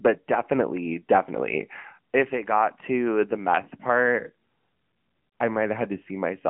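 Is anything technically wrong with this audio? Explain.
Yes. Throughout, the speech carries AMR narrowband mobile codec damage: band-limited to roughly 150 Hz–3.4 kHz, with nothing above 3.7 kHz. Its buzzy, synthetic vocal-tract-model texture, which fits a mid-rate mode around 10.2 kbps, distinguishes it from simple low-pass filtering.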